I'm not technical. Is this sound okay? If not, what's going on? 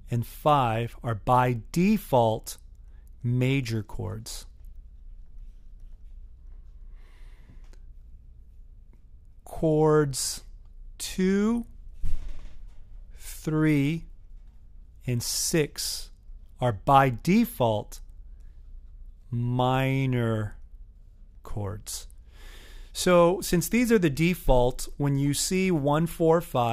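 Yes, the signal is in sound technical shape, with nothing in it that points to a problem in how it was recorded, processed or delivered.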